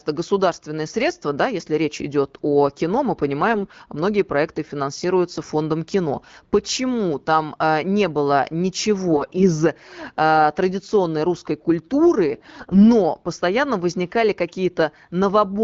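The speech turns hoarse and gargly while keeping its rough pitch and level at 3.50 to 3.79 s, after "идет о кино мы", at 9.11 to 9.49 s, before "э традиционной русской", and at 12.34 to 12.85 s, before "постоянно возникали". These are AMR bit errors: on a weak link a few percent of bits flipped in the less protected parts of the wideband frames. This misplaced the excitation pulses and skewed the fine pitch, gain and spectral values.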